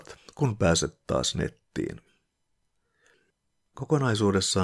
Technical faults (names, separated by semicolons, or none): none